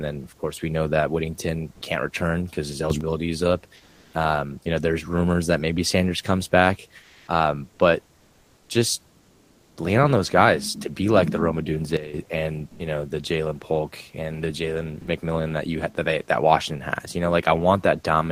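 Speech, with room noise about 38 dB below the voice, in which five gaps have comfort noise in place of the background: 1.73–1.81 s, 3.75–4.13 s after "is up", 7.01–7.27 s, 9.19–9.77 s before "lean on those guys", and 12.69–12.79 s before "know the". The likely cause is Opus discontinuous transmission filling pauses with synthetic noise. On a spectrogram the textured background turns to a smooth, uniform wash, stepping in level by about +7, +3, +3, −6 and +1 dB respectively. Two sudden gain jumps, likely from an unramped digital gain change, shift voice and background together. At 2.90–3.01 s the level rises by about 10 dB, and at 11.97–12.14 s it falls by about 12 dB. The waveform envelope shows a square step at each point. At 12.76–12.79 s the onset is clipped by the voice detector, likely because it reacted late. About 30 ms of the start of "know the" is missing, so the waveform leaps from noise straight into the word with no rising edge. 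At 15.01 s there is sound dropped by the voice detector, likely because it mistook part of the speech for background. A 60 ms stretch of speech is replaced by steady noise, seen as a brief hole in the harmonics.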